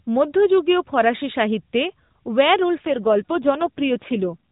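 An AMR rate drop runs from 2.80 to 4.46 s. The mobile codec falls to a lower mode and spends the freed bits on error protection, so the speech turns rougher and more synthetic with no gap and no loss of band. The change fits a shift from 12.2 to 5.9 kbps, against the lightly coded narrowband sound before it.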